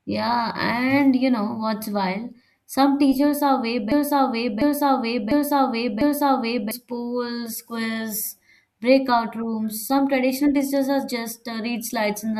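From 3.92 s to 6.71 s the speech falls into a broken-record loop: a chunk of about 0.7 s repeats four times back to back, likely from a player or stream stalling on its last buffer, and whatever should have played there is simply gone.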